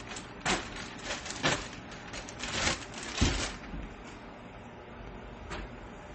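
From start to finish the audio stops at 8.4 kHz and carries layered artefacts: swirly, watery smearing over a metallic, replicated top band. That combination likely comes from transcoding between lossy codecs, consistent with a low-rate MP3 re-encoded to HE-AAC, each stage compounding the last.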